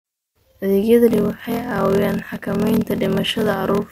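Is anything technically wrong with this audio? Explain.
Yes. From 1.09 s to the end, the speech has a block size mismatch (padded). Each block comes up short, fitting 1024-sample writes, and zeros fill the rest. That puts a gap in every block. The result is a 41.7 Hz buzz, with the speech running at 0.889 times normal speed but near its usual pitch.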